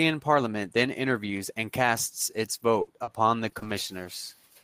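It's a short speech clip with a run of network packet-loss damage in its second half. Right after "interviews and casts its" you get short concealed packet loss at 2.59 to 2.63 s, then again at 3.03 to 3.09 s, 3.49 to 3.53 s, two back to back covering 3.59 to 3.67 s, and 4.03 to 4.07 s. Each hole is only 20 to 40 ms, and the receiver papers over it by extending whatever was sounding just before, so you hear a quick smear or wobble rather than silence, and a small bit of the speech drops out. Between those, at 2.81 to 2.89 s, there's a burst of packet loss, a gap of about 60 ms where several packets in a row didn't arrive in time. The concealment stretches the last sound into a brief held buzz or hiss that fades, and then the speech picks up again further along with that stretch simply gone. The clustering of all these drops between roughly 2.6 and 4.1 s suggests a patch of bad network conditions.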